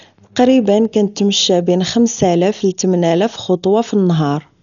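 Throughout the speech, the sound is dull and muffled, with nothing above about 6.9 kHz and a rough, fluttering noise clinging to tonal parts. This is likely heavy Dolby Digital compression at a low bitrate, around 48 kbps, where lines are starved of bits and filled with noise.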